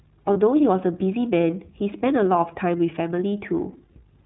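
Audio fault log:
Throughout: iLBC codec. The speech is band-limited to narrowband, with nothing above 4 kHz, and has a slightly rough, synthetic edge that's plainly audible. Each frame's excitation is coded on its own, which fits iLBC's 30 ms mode at about 13.3 kbps.
0.33–0.37 s and 3.93–3.99 s: lost iLBC frames. Each time a single 30 ms chunk drops out, and the decoder fills it by repeating the last pitch cycle with noise mixed in, so you hear a brief held, faintly buzzy vowel. Because frames stand alone, the speech recovers almost immediately.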